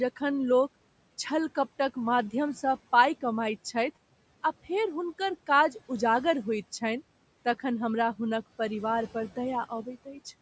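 From 10.05 to 10.26 s, the noise suppressor cuts into the speech. It mistakes quiet speech for background and turns it down, by about 11 dB at the deepest point. Around a tenth of a second is affected. That part sounds swallowed and faint.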